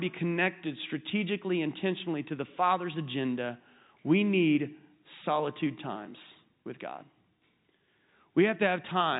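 Nothing goes wrong anywhere in this speech clip; it just has the narrow, phone-line character of G.711 telephone coding, with nothing above about 3.8 kHz coming through.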